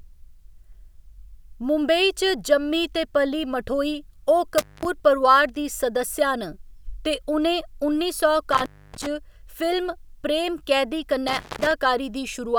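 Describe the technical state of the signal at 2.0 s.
At 2.0 s the speech signal is intact, with no dropout, clipping, glitch or other technical fault at that moment.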